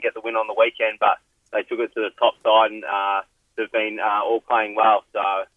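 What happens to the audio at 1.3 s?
Nothing goes wrong at 1.3 s; the audio runs through that moment intact, with no dropout, click or other disturbance.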